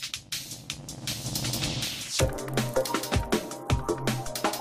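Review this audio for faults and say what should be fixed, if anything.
Nothing to fix: no faults found in the audio.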